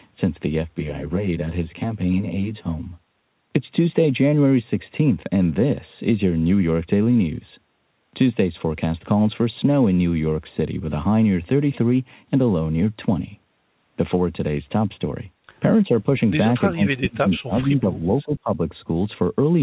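From 0.62 to 3.15 s, channel delay causes comb filtering: one channel runs roughly 10 ms late, and the mono sum cancels at evenly spaced frequencies starting near 40 Hz. The sound turns hollow and phasey, with fixed notches rather than sweeping ones.

Between 16.71 and 18.73 s, speech is suppressed in double talk, likely by an echo canceller ducking both sides at once. The talker drops by as much as about 20 dB, with around one and a half seconds affected in total.

At 17.34 to 17.39 s, a brief echo leak likely returns a scrap of the voice 393 ms late and about 25 dB down. A delayed copy like this separates it from the comb filtering's fixed notches.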